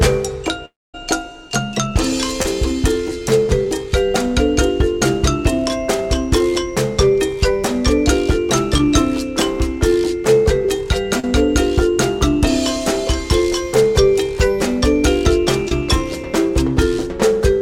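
From 0.65 to 0.95 s the audio cuts out in what is likely a long network dropout. Roughly 0.3 s never arrived. The receiver stretches the last sound into a brief fading buzz, then leaves about 0.23 s of near-silence before the audio resumes with that part gone.

Short concealed packet loss follows at 2.43–2.45 s, 3.65 s, 8.78–8.80 s, 11.20–11.24 s and 15.68–15.72 s. Each time, 10 to 30 ms of audio missed the decoder and was filled by extrapolating the preceding sound. Each gap is heard as a momentary smear or wobble.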